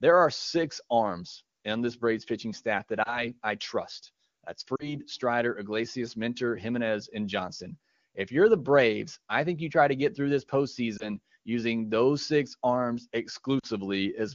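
Lost AMR speech frames occur at 3.04–3.25 s after "pitching staff that", 4.76–4.96 s, 10.97–11.08 s after "to get through this", and 13.60–13.67 s after "using those six arms". Each gap is 20 or 40 ms, and the decoder fills it by replaying earlier speech parameters at falling gain. It comes across as a short dip or warble before clear wideband speech resumes.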